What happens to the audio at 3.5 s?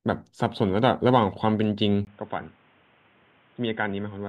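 The recording input was likely switched to a poorer device at 2.05 s, after a brief 20 ms silence, and 3.5 s falls within that stretch to the end. Nothing passes above 3.7 kHz, so the speech sounds dull and boxy, roughly 10 dB quieter, with a new noise floor about 30 dB down.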